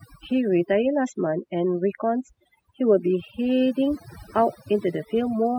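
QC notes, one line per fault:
Throughout: overdone noise removal. The background drops to near silence dotted with twinkling specks. A noise reducer set too hard is cutting individual frequency bands near its noise estimate, taking quieter parts of the speech along with the noise.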